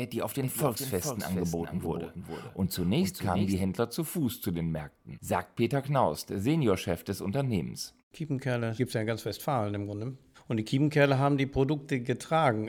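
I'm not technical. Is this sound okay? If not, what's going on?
No, from 0.43 to 3.55 s there's a doubled audio track: a quieter copy of the speech trails about 0.4 seconds behind, likely from the sound being recorded twice.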